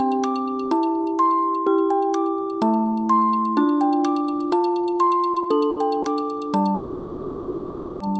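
Repeated stalls (stutter) run from 5.33 to 6.06 s. Packets reach the receiver late, so its jitter buffer runs dry four separate times in under a second. Each time the music is held by stretching the last sound for a moment. The longest hold is about 60 ms and the four add up to about 110 ms, roughly a seventh of that stretch. Nothing is lost, but the passage hiccups and drags slightly behind its own pulse.

A call audio freeze follows from 6.74 to 8.02 s, most likely caused by packets held up in transit long enough to empty the buffer completely. The receiver bridges the 1.26 s wait by continuing the last sound as a sustained, fading buzz rather than dropping to silence. When delivery resumes, the music picks up exactly where it stopped, now running about 1.26 s late. Through the whole clip the top end is cut off above roughly 8 kHz, which fits the Opus call codec's bandwidth setting.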